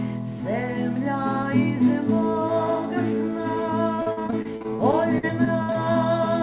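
From about 3.96 s to 5.97 s there's a stretch of repeated packet loss, and you get that robotic sound. Fifteen short holes open up one after another, none longer than 60 ms, and each is papered over by stretching the last bit of sound, so about a fifth of that two-second span is concealment. It comes across choppy, with chunks dropping out, all on top of a band-limited call path with nothing above 4 kHz.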